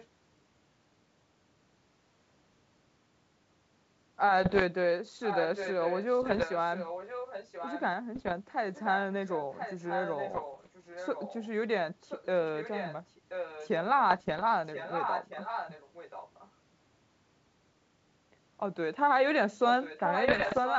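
A faint delayed copy of the speech, about 25 dB down, appears in the first 0.06 s and trails the talker by about 1.03 s. This is echo leak, likely from a far-end loudspeaker whose canceller let residue return. It recurs at 5.23–7.81, 8.74–8.91, 9.28–11.47 and 12.01–13.69 s at about 10 dB below the speech, and at 14.66–16.5 and 19.73–20.79 s at about 5 dB down.

Bit errors on an ADPCM link cause pops and rough bursts with brief level jumps at 4.44–4.63, 6.22–6.45, 8.15–8.34, 10.33–10.68, 14.11–14.43 and 20.28–20.59 s. Each flipped bit upsets the decoder's predictor and step size, so the damage rings on for some milliseconds. The error rate is around one percent, about half that at 10.3 and 14.1 s.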